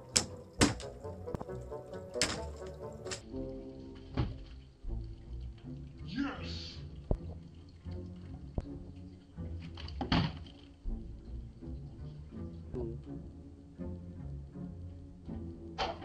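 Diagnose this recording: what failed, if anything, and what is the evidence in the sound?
A section at the wrong speed begins at 3.21 s and lasts to the end. The sound runs at 0.595 times its proper speed. Pitch falls roughly ten semitones as everything slows. The stage is likely playback or editing against the wrong clock.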